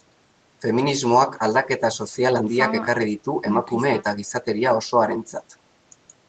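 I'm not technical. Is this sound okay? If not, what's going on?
Yes, the speech sounds fine, with the only thing to notice being the normal effect of a call microphone's processing, which trims the deepest bass and leaves nothing above about 8 kHz, just as a phone or video call would.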